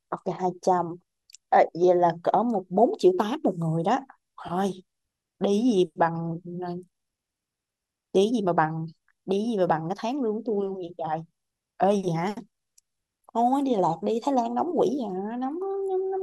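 No technical faults can be heard anywhere in the speech.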